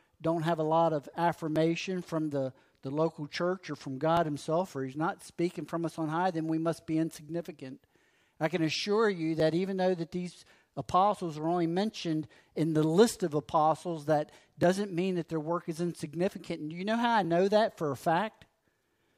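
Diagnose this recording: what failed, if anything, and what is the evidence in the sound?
Clock drift buffer slips: regular clicks every 2.61 s from 1.56 to 17.25 s, likely mismatched clocks making the buffer drop or repeat sample blocks.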